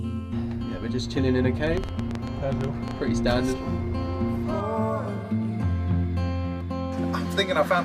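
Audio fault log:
1.67–2.92 s, train of clicks: A burst of about fifteen sharp ticks sits over the sound for a little over a second. They arrive at roughly 9.6 per second, but the spacing is uneven, so the ticking stumbles rather than keeping a steady beat. Each click has much the same short, hard shape and peaks around 10 dB above the surrounding audio. The likely cause is interference from nearby equipment or a faulty connection or power supply.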